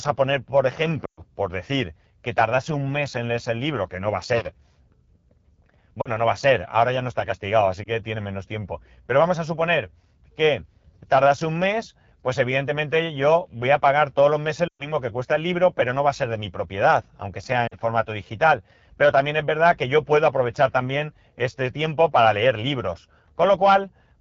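Rough, raspy speech throughout the clip is the AMR wideband (HD Voice) codec, with plainly audible damage that fits one of its two lowest rates, around 8.85 kbit/s. At 1.05 to 1.22 s and 14.68 to 14.91 s, the sound drops to near silence within two frames, leaving a gap of about 120 ms, then returns weak. Shorter dips or warbles occur at 6.01 to 6.10 s, 7.83 to 7.89 s and 17.68 to 17.76 s. These are lost AMR speech frames: the decoder reused the last good settings at falling gain.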